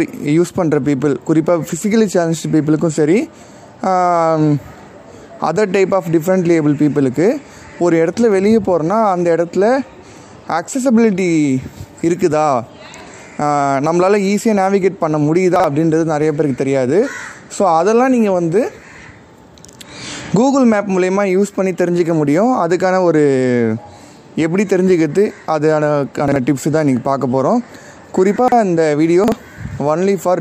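At 15.56, 26.28, 28.36 and 29.24 s the audio has chunks out of order: a 40 ms block plays one position late, or three at 28.36 s. Each spot sounds like a brief jumbled stutter, with hard joins where the displaced block is spliced in.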